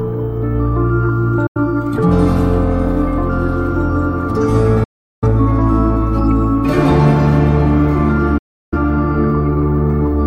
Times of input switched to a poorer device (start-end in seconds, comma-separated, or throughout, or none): none